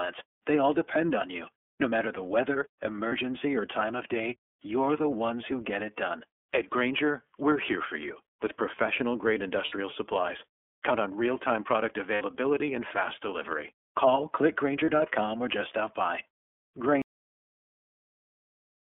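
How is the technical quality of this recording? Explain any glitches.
The quality is fair but clearly compromised. The speech is narrowband and coded, with four short dropouts and an abrupt ending.

Throughout, the iLBC codec is plainly audible. The line is band-limited to roughly 250 Hz to 3.4 kHz, and the voice has that rough, slightly synthetic edge, which fits the 13.33 kbps mode.

There are lost iLBC frames at 3.08–3.13 s (between "matter the weather" and "or time of day"), 9.65–9.73 s, 12.14–12.22 s (between "on real time product" and "and fast delivery"), and 14.85–14.89 s (just before "or just stop by"). The decoder fills each gap of about 30 or 60 ms by repeating the last pitch cycle with some noise, so you hear a brief buzzy held vowel before it snaps straight back.

The cut-off end comes at 17.02 s. The final buffers never got written, so the audio drops mid-sound into dead digital silence with no natural decay.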